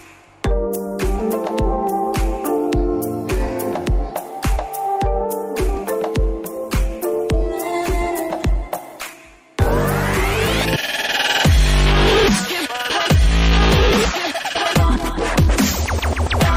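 At 6.65 s the call's bandwidth estimate collapses and the encoder is pushed into a call bitrate drop. The coarser coding sounds like a fall from roughly 64 kbps to around 18 kbps, and at that rate Opus strips away the upper frequencies. The sound turns muffled and watery, with a rough, grainy texture, and stays degraded for about 2.9 s before full clarity returns at 9.59 s.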